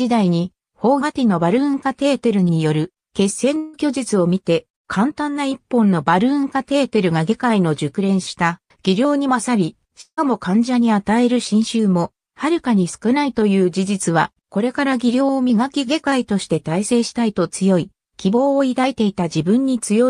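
Long network dropouts at 3.57–3.75 s and 10.01–10.19 s: about 160 ms of audio went missing each time, likely from lost packets. The receiver stretched the last sound into a fading buzz, with silence in the second gap before the audio resumes past the lost part.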